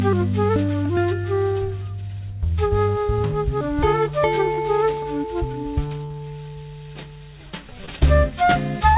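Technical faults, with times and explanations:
3.58–3.62, 4.54–4.62, 6.06–6.12 and 7.86–7.89 s: short concealed packet loss. Each is a brief smear or wobble in the music. Roughly 20 ms of audio went missing each time, 40 ms at 6.06 s, and the receiver bridged the gap by extending the preceding sound before blending back in. At 4.54 s about 14 ms was also dropped to catch up. All of this sits within the call path's 4 kHz band limit.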